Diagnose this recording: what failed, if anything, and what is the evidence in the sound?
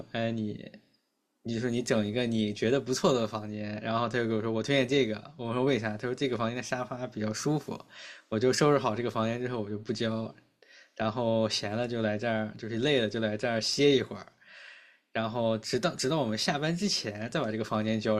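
Nothing in the signal chain has failed, and the speech signal stays continuous and steady in level and timing throughout the recording.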